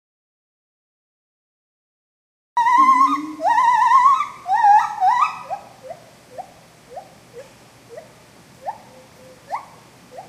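From the very start until 2.57 s the clip is dead silent: an audio dropout to silence already under way when the recording begins. The gap is silent, with no room tone or noise floor, and the sound then appears abruptly mid-flow rather than fading in. The likely cause is a lost input, such as a disconnected device, a failed link or a stray mute, while the recorder kept writing silence. Whatever sounded during that stretch is unrecoverable.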